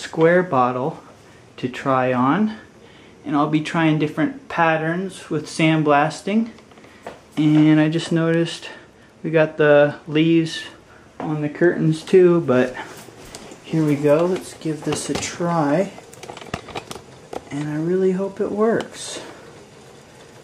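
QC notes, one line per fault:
No technical faults were found anywhere in the signal.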